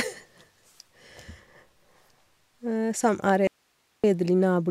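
A speech recording with an audio dropout to a faint residue: from 3.47 to 4.04 s the speech cuts out abruptly, leaving only faint hiss roughly 45 dB down, likely a brief signal loss on a still-live path.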